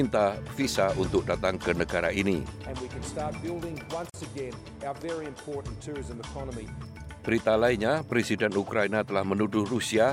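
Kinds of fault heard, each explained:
Gap at a join of encoded pieces: separately encoded sections were butted together with untrimmed encoder delay and padding, leaving a 44 ms gap near 4.10 s.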